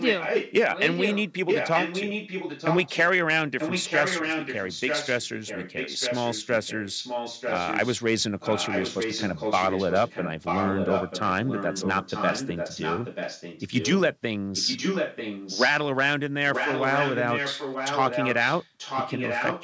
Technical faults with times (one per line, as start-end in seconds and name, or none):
0.00-2.97 echo leak
3.59-8.05 echo leak
8.40-13.94 echo leak
14.55-15.74 echo leak
16.52-19.64 echo leak